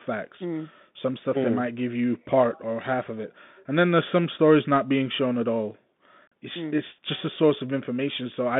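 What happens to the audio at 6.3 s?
At 6.27 s, just after "being shown at all", the Bluetooth link between headset and phone dropped voice packets for about 41 ms, around ten of them in a row, and nothing concealed the loss. This is unconcealed Bluetooth headset packet loss: the missing stretch was filled with silence or an idle pattern, so the speech falls into a brief hole ending at 6.32 s, with abrupt edges.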